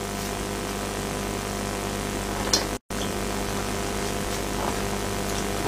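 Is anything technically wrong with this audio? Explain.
Yes, there's one problem: a gap at a join of encoded pieces, running from about 2.77 to 2.90 s. The audio was evidently encoded in separate chunks and stitched together without trimming, so one piece's padded final frame and the next piece's startup delay both stay in. You hear the sound cut out for roughly 136 ms with smeared edges, then pick up exactly where it stopped.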